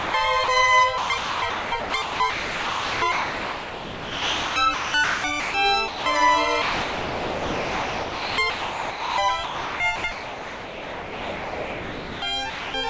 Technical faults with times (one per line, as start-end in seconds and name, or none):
0.00-0.14 sound dropped by the voice detector
0.44-0.48 sound dropped by the voice detector
0.98-5.54 sound chopped by the voice detector
5.88-6.06 sound dropped by the voice detector
6.62-9.18 sound chopped by the voice detector
9.44-12.22 sound chopped by the voice detector
12.50-12.74 sound dropped by the voice detector